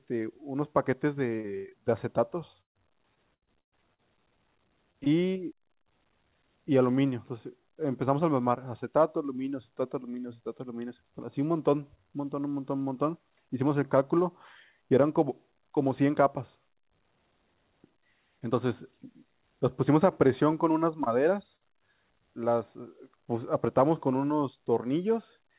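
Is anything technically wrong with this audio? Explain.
Yes. The speech carries packet-loss damage of three kinds, heard through a call path whose band stops at 4 kHz, consistent with a G.711 A-law codec.

Repeated packet loss (robotic sound) runs from 1.36 to 1.73 s and again from 3.15 to 4.00 s. The first stretch has four gaps totalling about 180 ms, the longest 92 ms, so nearly half of that span is concealed. The second has seven gaps totalling about 300 ms, the longest 118 ms, so about a third is concealed. Each hole is filled by extending the preceding sound, and the next hole arrives before the speech settles again. The result is choppy speech with pieces missing.

A burst of packet loss occurs at 2.61 to 2.77 s, removing about 140 ms in one run. The receiver extends the last sound and ramps it down, and roughly 120 ms of the gap ends up as silence before speech resumes further on, with the material in between gone. 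A shorter burst at 21.56 to 21.63 s removes about 40 ms and is patched the same way, leaving a brief held or fading fill and a skip.

Short concealed packet loss appears at 4.92 to 4.96 s, 5.04 to 5.08 s and 21.04 to 21.08 s, each losing about 20 ms. The decoder bridges each hole by continuing the prior pitch or noise shape and then blends back into the received audio. Each one is a brief smear or wobble, and a short consonant at that point can disappear.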